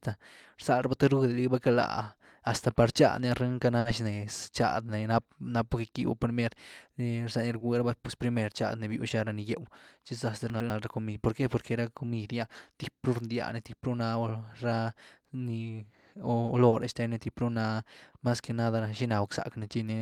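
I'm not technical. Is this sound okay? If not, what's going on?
No. There are three kinds of glitch in this speech.

At 3.79 s, just after "chadny ah rinka na", and again at 7.59 s, there is a short stall from a late packet. The audio arrived late, so the last sound is held for about 60 ms and then 20 ms. Nothing is lost.

From 10.5 to 10.7 s, the chunks are out of order. A 100 ms piece plays one step too late. This gives a jumbled moment.

At 16.69 s, just before "shtenny typru na mas", there is a short concealed packet loss. About 40 ms never arrived. The gap was patched over, so it sounds like a brief smear.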